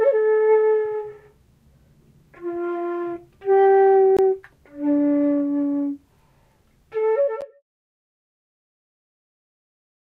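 Everyday sounds here, with two blocks of digital silence: about 19 ms at 4.17 s, heard as a brief hole, and about 11 ms at 7.41 s, short enough to read as a tick. The second fits a 512-sample buffer. Both point to either an output buffer left unfilled or invalid numbers zeroed out. The fade-out from roughly 7 s to 7.63 s is just an ordinary edit.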